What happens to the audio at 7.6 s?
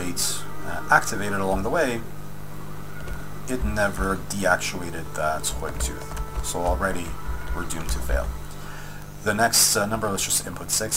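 At 7.6 s a steady, raspy buzz sits under the sound, about 15 dB below it, and it runs through the whole clip rather than starting there. This is mains buzz: sharp switching spikes twice in every 50 Hz cycle leak in, spreading harmonics up to several kHz.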